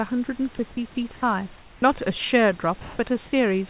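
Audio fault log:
2.81–2.99 s, sound dropped by the voice detector: speech gives way to steady comfort noise, losing 80 ms, likely because the detector took part of the speech for background.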